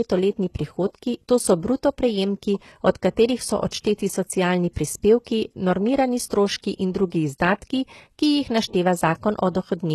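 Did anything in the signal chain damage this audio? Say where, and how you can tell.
Yes, at the codec stage. Throughout the speech the treble sounds gritty and lispy on s sounds, and nothing sits above 12.3 kHz. A spectrogram shows a hard ceiling there, with upper bands resembling coarse copies of lower ones. This is likely HE-AAC compression, consistent with a bitrate near 16 kbps.

There is also pre-echo from the same codec. At 3.70 s a short hiss runs for about 23 ms ahead of an attack, which sounds softened. On the waveform, low-level noise rises before the transient. On a spectrogram, a broadband smear leads it, because quantisation noise was spread across the whole transform block.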